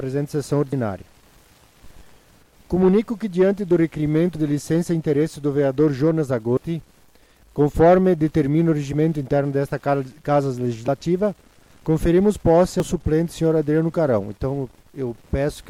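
Abrupt forward jumps in the sound at 0.73, 4.35, 6.57, 10.88, 11.86 and 12.80 s, each skipping roughly 40 ms except the one at 6.57 s, which skips about a tenth of a second. Likely a dropped buffer (overrun): samples overwritten before capture, splicing the edges together.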